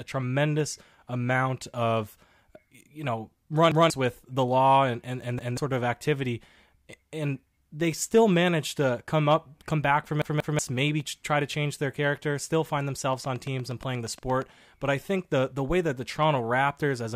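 At 3.72 to 3.90 s and again at 5.39 to 5.57 s, new audio failed to reach the playback device in time, so it replayed its last buffer once: a repeated buffer. Each block lasts about 186 ms, which fits an 8192-sample buffer. A short stretch of speech is heard twice with a hard join, and roughly a fifth of a second of following audio is missing. At 10.22 to 10.59 s the same block plays two extra times, a longer stutter that drops about 0.4 s.

From 13.13 to 14.43 s, a train of clicks runs over the speech. It is likely interference from nearby equipment or a faulty connection or power supply. Around ten similar pulses arrive at an even pace of about 8.6 per second, each roughly as loud as the speech itself. They are heard as a steady ticking laid on top of the sound, persisting through any pauses within that span.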